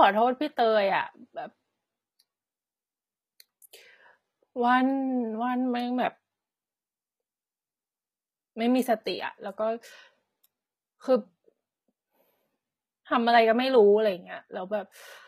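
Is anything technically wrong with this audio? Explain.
Yes. Throughout the speech, the treble sounds synthetic, with gritty, metallic s sounds, which points to HE-AAC compression, likely at a very low bitrate of around 20 kbps. Only the lower band is coded. The upper band is rebuilt from copied lower bands under a coarse envelope, so its harmonics misalign.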